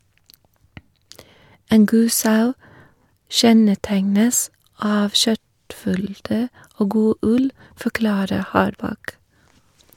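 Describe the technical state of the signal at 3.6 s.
At 3.6 s the speech signal is intact, with no audible dropout, distortion, clipping, glitch or other fault.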